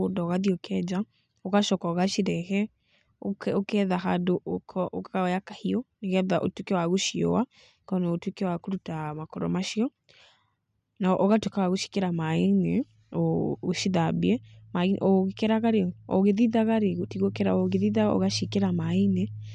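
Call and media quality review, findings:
No findings for this call and media quality review.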